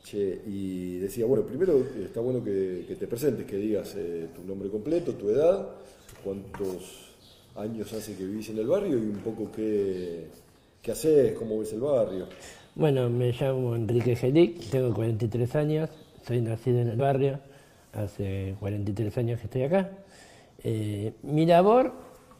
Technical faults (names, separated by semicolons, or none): damaged data in a compressed stream